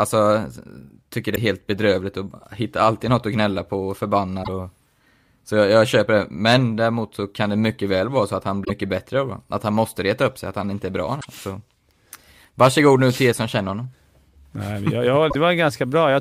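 Damaged data in a compressed stream makes the decoder misread frames and lose sync, producing short glitches at 1.32–1.38 s (before "helt bedrövligt"), 4.40–4.49 s (after "att gnälla på och"), 8.61–8.71 s, 11.17–11.25 s (after "han inte är bra") and 15.27–15.35 s.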